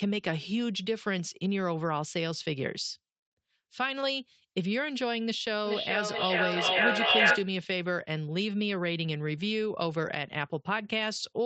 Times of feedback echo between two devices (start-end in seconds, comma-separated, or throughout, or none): 5.66-7.61